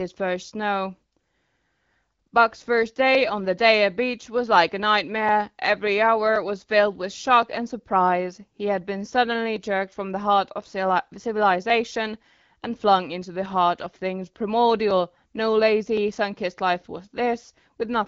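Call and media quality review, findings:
Clock drift buffer slips: regular clicks in the speech every 1.07 s, 1.0 to 17.0 s, around fifteen. Likely two devices on free-running clocks, roughly 700 ppm apart. The buffer between them creeps full or empty, then drops or repeats a small block, a few dozen samples. AMR-WB path at 12.65 kbit/s, band tops out near 7.5 kHz.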